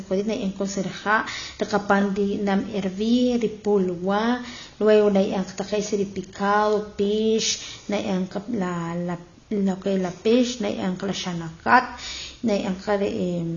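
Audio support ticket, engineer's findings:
Speech band-limited throughout, nothing above 6.9 kHz; dull, smeared top end, codec damage plainly audible. Likely AAC compression (AAC-LC) at low bitrate; the encoder drops the cut-off to save bits, consistent with roughly 24 kbps.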